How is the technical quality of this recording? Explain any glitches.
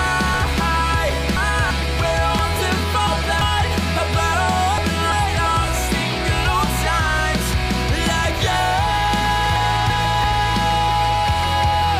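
The recording has repeated sequencing glitches: chunks out of order at 0.34 to 1.71 s, 2.39 to 3.41 s, 4.78 to 5.46 s and 9.56 to 10.24 s. Blocks of 341 ms arrive late by three, two, one and one chunks. They play after material that should follow them. Each spot sounds briefly jumbled.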